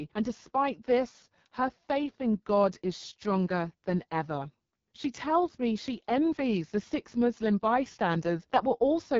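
From start to finish the speech sounds rough and raspy, with a buzzy, synthetic edge and a hissy top that stops at about 7.4 kHz. This is the AMR wideband (HD Voice) codec at heavy compression. Below 6.4 kHz the voice is rebuilt from a pulse-excited vocal tract model, and the band above is filled with shaped noise. The harshness points to one of its lowest rates, around 6.6 kbit/s.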